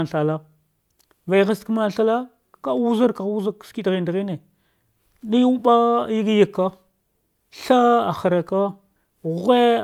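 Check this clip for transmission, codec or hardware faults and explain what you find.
Nothing wrong turns up anywhere in this speech recording. Careful listening across the whole clip reveals no problem worth reporting.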